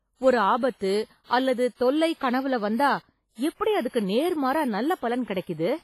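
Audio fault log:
Throughout: WMA compression. The speech carries a washy, ringing smear and a hiss that swells and fades with the voice, and nothing is heard above about 15.5 kHz. This is likely a transform codec working with long blocks, where quantisation noise spreads over tens of milliseconds around each sound and weak spectral lines are zeroed. The heavy damage fits a low bitrate of around 24 kbps.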